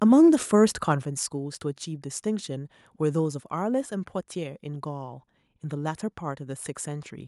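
A speech clip with a microphone volume stepped down at 1.02 s: the whole signal, voice and background alike, drops abruptly by about 6 dB and stays lower. The likely cause is call software automatically reducing the device's input volume in a single step.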